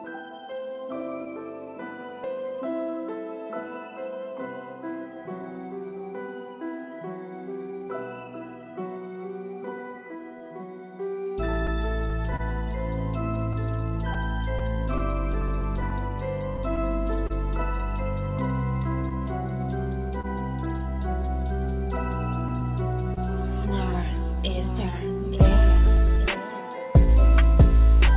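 Clock drift between sender and receiver runs through the whole clip. The sender's clock runs about 2 percent slow, so the receiver's buffer keeps draining.

From 0.1 s to 28.07 s, repeated timing corrections stretch the sound. Playback runs at 99 percent speed, adding roughly 0.4 s.

Between 10.39 s and 20.26 s come scattered short gaps, about fifteen of them, none longer than about 30 ms. Each is bridged by extending the last sound. They are heard as brief ticks or smears.

At 23.14 s, a short stall from a late packet holds the sound for 30 ms. Nothing is lost, but there is a slight buzz or dip. Throughout, nothing sounds above 4 kHz, which fits a G.711 call path.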